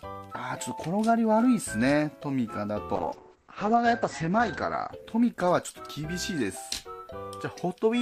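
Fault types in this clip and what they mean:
Call bitrate drop: the encoder's bit budget collapses, so audio turns coarse and watery; spectrogram content above 8 kHz vanishes, fitting about 10 kbps.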